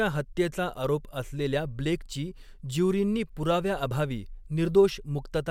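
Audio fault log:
0.20–5.48 s, clock slip clicks: faint, evenly spaced ticks recur about every 0.15 s, roughly forty in all, each a single-sample discontinuity. The steady rate points to two free-running clocks drifting apart by around 150 ppm, likely forcing periodic sample drops or repeats.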